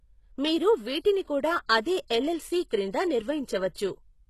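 Throughout the clip the upper spectrum has been rebuilt rather than coded, most likely by HE-AAC compression at a very low bitrate, around 16 kbps. Copied treble stops at 12.3 kHz and sits unevenly on the lower bands, so the speech sounds gritty, with heavily damaged, lispy sibilants.

From 0.99 to 1.05 s, a codec block spread its quantisation noise across the silence before a sharp onset. This pre-echo leaves about 56 ms of hiss just ahead of the attack, which then sounds softened and smeared.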